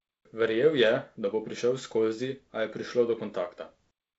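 No faults in this speech; it is carried over G.722 wideband telephone coding, with nothing above about 7.7 kHz and the slightly grainy lower band pointing to its 48 kbit/s mode.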